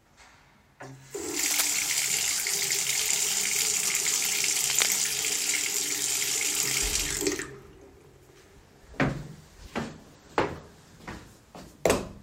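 At 1.39 to 1.63 s, and again at 4.69 to 5.12 s, dense, irregular bursts of scratching and rustling sit over the sound, only a little quieter than the sound itself. This is cable scratch noise, likely from a worn cable, connector or control being moved. As the contact shifts, its resistance jumps erratically, adding crackling noise for as long as the movement lasts: about a quarter second first, then nearly half a second.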